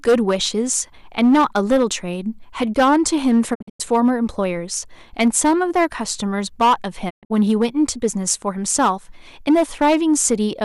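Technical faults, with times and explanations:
Throughout: hard clipping. Every louder syllable carries a harsh, gritty fuzz, with crackle on the strongest peaks. The speech was driven about 10 dB past the level some stage could pass, so the peaks were cut off flat. A few percent of samples sit at that ceiling. Those squared-off tops add harmonics high up the spectrum, which is why the distortion sounds bright and rasping rather than just louder.
3.53 to 3.81 s and 7.09 to 7.32 s: digital broadcast dropout. In each stretch the speech breaks into short holes of silence, with quick fades of about 20 ms at the edges. The first stretch loses 192 ms spread over 240 ms, with a longest gap of 96 ms. The second loses 168 ms over 192 ms, with a longest gap of 120 ms. The receiver muted whenever frames failed, which points to several damaged frames in a row. Whatever was sent during those holes is gone.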